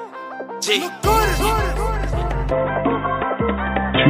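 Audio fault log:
2.51–4.10 s, input switched to a poorer device: at 2.51 s the sound abruptly turns dull and boxy, with nothing above 3.8 kHz, a level shift of roughly 5 dB, and a new, faint background noise well beneath the signal. There is no gap at the change. The likely cause is the system changing its input mid-recording to a narrower-band microphone or headset call profile, which brings its own tone, level and noise floor.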